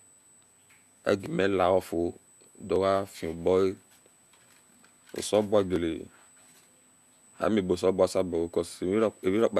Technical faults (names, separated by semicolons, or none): clock drift buffer slips